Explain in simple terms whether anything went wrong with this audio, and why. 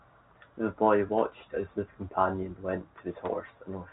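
Nothing went wrong with this audio; the speech just has the narrow, muffled sound of ordinary telephone coding (G.711), which drops the highest frequencies as any normal phone line does.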